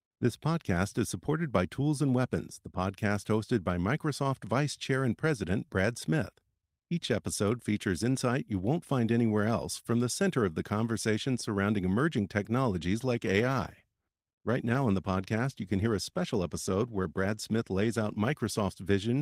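At 12.93 s there's a call bitrate drop: the encoder gets starved, fitting roughly 32 down to 17 kbps, so the speech goes rough and muffled until 18.99 s.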